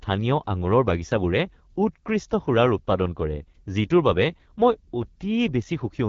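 From start to finish, the speech carries the marks of the AMR wideband (HD Voice) codec. The damage is plainly audible. Voices sound rough and raspy. That points to one of the codec's lowest rates, which fits about 8.85 kbit/s. The codec rebuilds speech from a pulse-driven model of the vocal tract, and at this rate it lacks the bits to do it cleanly. Above 6.4 kHz it adds only shaped noise, not real detail. Nothing is left above 7.4 kHz.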